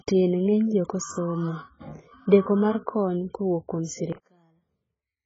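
Right from the start the speech sounds dull and smeared, with nothing above about 7.6 kHz and a watery, fizzy edge on sibilants. That's likely heavy AAC compression: the encoder starved for bits, which fits something like 12 kbps AAC-LC, chops the top end and blurs the rest.

Then at 4.13 s, just after "mar kony kowuok kuom", the voice suddenly collapses by about 34 dB and stays that way to the end. One channel inverted is the likely culprit. Summed to mono, the centred voice cancels itself, leaving only a faint ghost.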